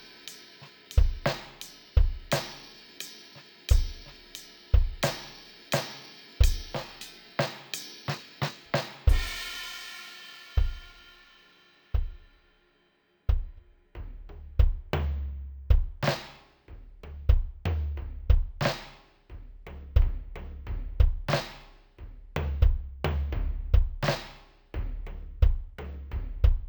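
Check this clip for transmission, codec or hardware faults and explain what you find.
One fault affects the whole music clip: stereo read as mono. Left and right samples are read alternately as one channel. The music plays at half speed and an octave low, with a faint mirrored image high up.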